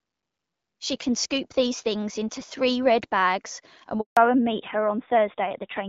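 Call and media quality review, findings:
Handover gap, 4.01 to 4.17 s, right after "red bags and we". Audio dies within milliseconds, then clean silence for about 160 ms. Probable component: network handover, with no frames delivered mid-switch. Unlike loss concealment, no smeared or repeated fragments fill the hole.

Fallback to narrowband, 4.17 s to end. Everything above 4 kHz gone, duller and rougher timbre. Probable component: codec renegotiation after handover, which fits a drop from AMR-WB 12.65 kbit/s to AMR-NB around 7.4 kbit/s. A hard, persistent 4 kHz ceiling, unlike low-rate AMR-WB rasp, which keeps the wider band.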